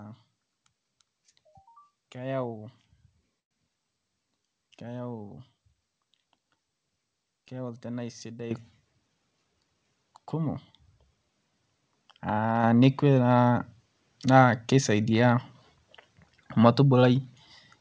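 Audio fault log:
3.40–3.53 s, call audio freeze: the speech stops for about 0.13 s, with the last sound carried briefly and then roughly 0.1 s of silence before the audio resumes exactly where it left off. Nothing is lost; a gap has been inserted instead, which shifts everything after it later by about 108 ms. The likely cause is delayed packets draining the jitter buffer, so the receiver stretched the final sound and then fell quiet until the packets arrived.
8.51 s and 12.64 s, microphone volume stepped up: at each point the speech and the background noise jump in level together and stay at the new level. The first step is about 10 dB and the second about 5 dB, and both happen within about 10 ms. Because the whole signal rises at once, this points to the call software raising the device's input volume in one step after judging the microphone too quiet, rather than to any change at the talker.
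9.01–9.75 s, jitter buffer speed-up: for about three quarters of a second the speech runs at about 114% of normal speed without any change in pitch, and it sounds hurried. Roughly a tenth of a second of audio is removed in total, taken as many short cuts of one or a few pitch periods each. This happens when the buffer holds more audio than its target, for example after delayed packets arrive together, and the receiver trims short pieces to bring the delay back down. The audible result is a compressed, rushed stretch of speech rather than any obvious cut. This stretch follows the 10 dB step.
Throughout, the call path's G.722 coding leaves nothing above 8 kHz.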